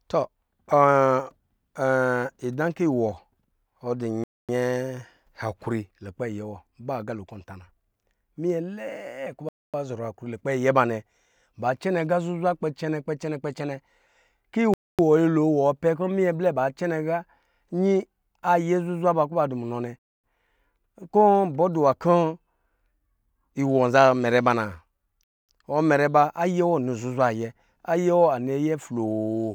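Gaps between chunks occur at 4.24, 9.49, 14.74, 19.99 and 25.24 s, each a 250 ms silence. The speech was delivered in 5-second chunks, and a quarter second of dead air was left at every join. Nothing is missing from the speech itself; it simply stops and resumes, so the holes recur every 5.25 s with a regular, mechanical rhythm.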